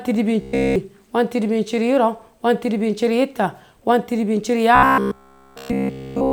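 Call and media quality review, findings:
Robotic sound from repeated short buffers, 0.41–0.76 s and again 4.75 s to the end. Rigid metallic buzz at 66.8 Hz. Likely the playout buffer starving and looping its last ~15 ms, with essentially all the real audio skipped.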